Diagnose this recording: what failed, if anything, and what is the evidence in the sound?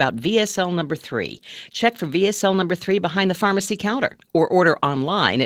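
The codec stage failed. Opus voice compression runs throughout this speech, and the coding points to roughly 16 kbps in hybrid mode: SILK handles the band below 8 kHz, and a thin CELT layer covers the band above it. The coarsely coded excitation makes the speech plainly hoarse and slightly robotic.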